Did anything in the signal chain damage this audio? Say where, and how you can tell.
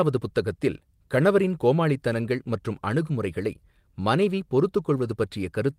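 No, the signal chain shows no audible damage anywhere in this speech clip.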